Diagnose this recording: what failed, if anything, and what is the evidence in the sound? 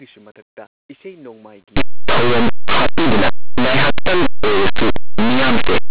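The sample-format conversion stage failed. From 1.77 s to the end, at about 5.9 s, the speech collapses into harsh, very loud distortion. This is linear audio read as companded. Plain linear 8-bit samples were expanded as if they were mu-law codes. Small values just to one side of zero map to the largest mu-law outputs. Their mirror images on the other side stay tiny. Quiet passages therefore explode into loud, rasping noise.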